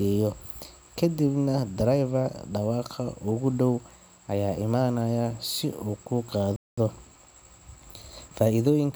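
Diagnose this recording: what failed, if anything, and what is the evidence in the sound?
At the playback stage, the speech halts abruptly at 6.56 s and the output stays silent until 6.78 s, a gap of about 213 ms. This is a playback stall, likely caused by the player running short of buffered data or its thread being blocked.

Also at playback, once the sound returns at 6.78 s, the speech runs hurried until 8.82 s, at 1.1 times normal speed. This is time-compressed catch-up: the player trims its backlog by removing short slices and cross-fading across the joins. What separates it from a simple sample-rate speed-up is the pitch, which stays at its normal level instead of rising with the tempo.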